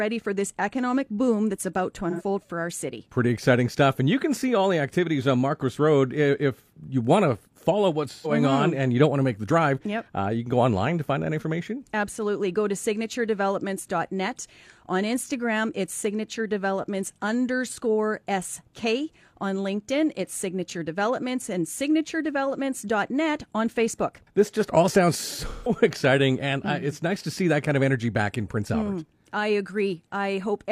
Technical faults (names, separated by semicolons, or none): AAC frame loss with concealment